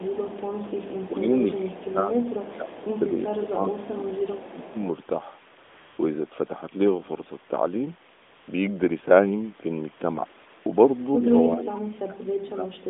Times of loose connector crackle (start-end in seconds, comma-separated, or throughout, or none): none